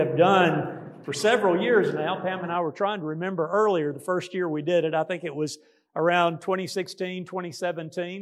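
No technical faults are audible.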